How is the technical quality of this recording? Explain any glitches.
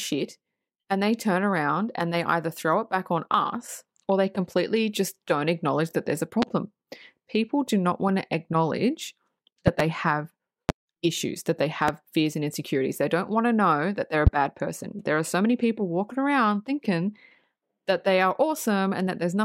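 The recording is marred by five loud pops, each roughly 20 dB above the speech, at 6.42–6.45 s, 9.67–9.82 s (a double pop after "not want to acknowledge"), 10.69–10.72 s (just before "issues that they"), 11.88–11.91 s (between "issues that they" and "fears and insecurities"), and 14.27–14.30 s. Each is a likely voltage spike from a plug, switch or static charge riding on the signal. Unlike a dropout click, the speech continues unbroken underneath.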